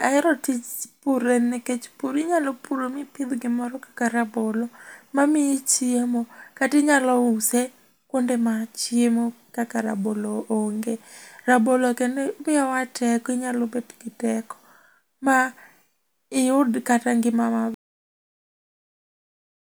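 A speech recording with a cut-off end: at about 17.74 s the audio just stops dead, mid-sound, and it's flat digital silence from there to the end, with no tail or natural decay at all. That's what you get when the final buffers never make it to disk or out to the output, so whatever was in flight simply vanishes instead of finishing. Last couple of seconds of the clip are effectively empty.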